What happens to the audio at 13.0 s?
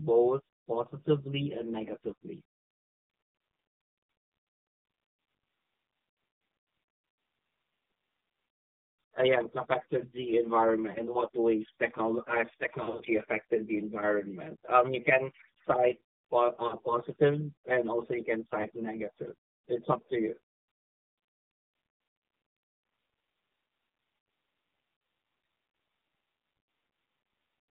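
Between 12.84 and 13.04 s, speech frames were lost on the radio link and failed their checksum, so the AMR decoder had to conceal the gaps by reusing the last good pitch and vocal-tract settings at reduced gain. Around 120 ms went missing, scattered over 160 ms and never more than 40 ms in a row, which fits about six lost 20 ms frames. The result is a short patch of dips and warbly, smeared sound rather than a clean dropout, with the voice coming back weak or rough for a moment as normal decoding resumes.

Underneath, at this moment as everywhere, the signal is passing through the AMR narrowband mobile codec. The line is limited to roughly 150 Hz to 3.6 kHz, and a vocal-tract model rebuilds the speech from a few pulses per subframe. Its plainly audible buzzy, synthetic edge points to a low bitrate around 7.4 kbps.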